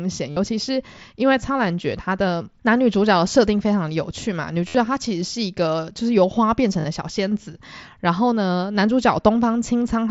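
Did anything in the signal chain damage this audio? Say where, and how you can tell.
Yes. Buzzy, held-level tones replace the speech at 0.30–0.37 s, 4.68–4.75 s and 6.81–6.85 s, each warbling slightly as real audio returns. This is concealed Bluetooth headset packet loss on the wireless link. Runs of lost voice packets were filled by looping the best-matching recent waveform.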